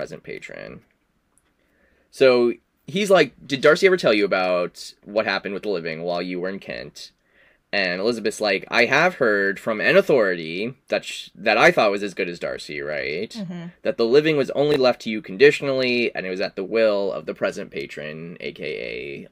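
A speech recording with a brief jumbled moment at 14.72 to 14.76 s, where chunks play out of order: a 20 ms chunk arrives one chunk late and sounds after the chunk that should follow it. Nothing drops out, yet the swap leaves three hard joins, heard as a quick garble. On a waveform, the 40 ms span shows abrupt discontinuities at each join; a spectrogram shows thin vertical broadband lines and misaligned formant tracks there.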